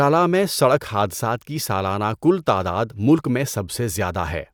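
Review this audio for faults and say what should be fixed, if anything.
No faults found; nothing here needs fixing.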